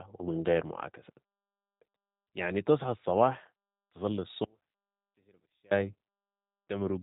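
Throughout the clip the speech has passed through a low-rate speech codec that rebuilds each short frame from a vocal tract filter, a pitch predictor and a few coded pulses, and the result fits the G.729 codec at 8 kbit/s. Nothing above about 3.8 kHz survives, so the sound is dull and band-limited. The codec damage is plainly audible: the speech has a rough, synthetic, slightly buzzy texture where the pulse model approximates the real excitation.

From 4.44 s to 5.71 s the signal path most likely lost its input while the stages after the break stayed live, giving an audio dropout to a faint residue. The speech cuts out abruptly mid-flow, and for about 1.27 s only a faint leak of sound remains, roughly 35 dB below the normal level. It then returns just as suddenly. The hard edges mark it as a fault, not a natural pause or a fade.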